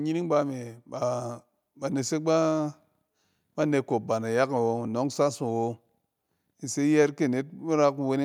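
At about 1.02 s the microphone volume is stepped up: the calling software judges the input too quiet and raises the device's input gain in a single jump of about 4 dB rather than ramping it gradually. Because the change happens at the microphone, before any processing, the speech and the background noise beneath it rise together at that instant, producing an abrupt lift in loudness that stays at the higher level afterwards.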